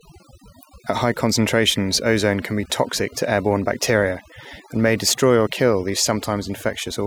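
From start to finish the gaps between phrases fall to near silence sprinkled with twinkling specks. That is overdone noise removal: a noise reducer set too hard is cutting any frequency band near its noise estimate, taking the quieter parts of the speech with it.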